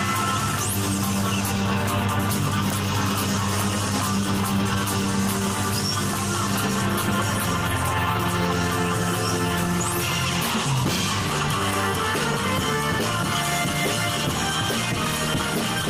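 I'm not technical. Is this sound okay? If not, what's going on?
Yes, the sound seems fine: nothing stood out as a problem when I listened.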